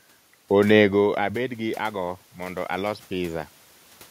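A speech recording in which automatic gain rising, from 0.79 to 3.55 s, slowly lifts the voice and the room noise together by about 6 dB after the talker moves away from the microphone at about one second and the input drops by about 14 dB. The move by itself would lower only the voice, but here the background swells along with it.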